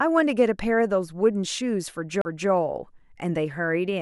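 At 2.21 to 2.25 s a CD skip occurs: the laser jumps to another turn of the spiral, so playback mutes for about 40 ms, then resumes elsewhere in the track. This differs from a plain dropout, which resumes where it stopped.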